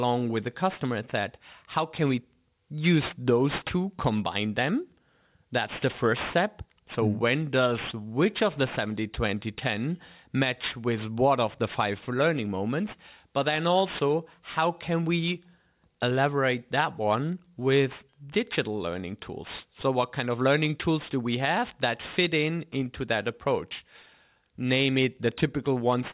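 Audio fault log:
Throughout, aliasing: the speech was taken down from 48 kHz to what sounds like an 8 kHz rate without a proper low-pass filter first, so everything above the 4 kHz fold point reflects back into the band at wrong, unrelated frequencies. Sibilants come out gritty and metallic, with folded energy sitting fairly high, roughly 15 dB under the signal. Unlike plain band-limiting, which just dulls the top, here the spectrum stays full right up to 4 kHz and carries harsh, inharmonic content.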